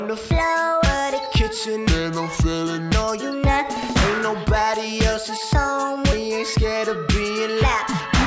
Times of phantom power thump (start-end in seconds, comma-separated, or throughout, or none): none